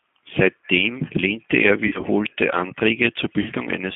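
Throughout, the G.729 codec at 8 kbit/s confines the speech to about 150 Hz to 3.5 kHz, and its pulse-based excitation gives a plainly rough, synthetic texture. From 1.87 to 2.06 s, just after "lehnte er", VoIP packet loss concealed by the speech codec removes about 80 ms scattered over 160 ms, in runs up to 40 ms. The decoder stretches the last pitch and filter into a fading buzzy tone or coloured noise. At 3.42 to 3.50 s, another 40 ms gap is concealed the same way.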